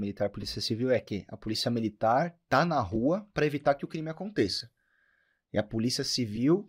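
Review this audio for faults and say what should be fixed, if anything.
Lost LE Audio frames at 0.41, 2.95, 4.59 and 6.36 s, gaps of about 7.5 to 15 ms, consistent with one or two LC3 frames each, concealed with sign-scrambled repeated spectrum, leaving short noisy smears. Improving the Bluetooth link margin or retransmission settings would prevent these dropouts.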